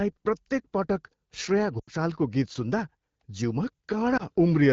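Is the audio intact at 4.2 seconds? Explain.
No. From 4.17 to 4.23 s there are lost AMR speech frames: a frame failed its checksum, so the decoder repeated the previous pitch and vocal tract settings at reduced gain. The result is a brief dip or warble, consistent with a single lost 20 ms frame. A plain dropout would go to a hard gap or click; this concealment smears the sound across the gap instead.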